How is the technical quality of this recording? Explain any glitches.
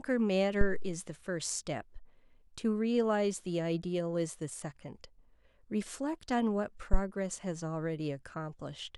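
Two low-frequency glitches disturb the recording. Phantom power thump, at 0.61 to 1.04 s and again at 6.93 to 6.99 s: a supply switching on a live input sends a sudden voltage step through the coupling capacitors, which reaches the output as a deep thud. The first peaks at about −15 dBFS and dies away over roughly 97 ms. The second is sharper, peaking at about −12 dBFS and fading within about 12 ms.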